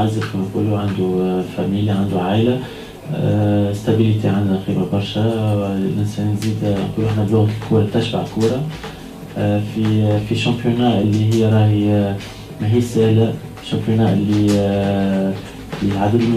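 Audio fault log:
Nothing to log here; I listened all the way and didn't catch a single technical problem in the audio.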